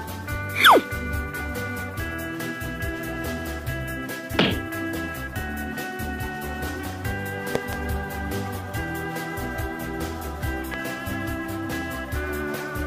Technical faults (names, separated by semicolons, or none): loud pop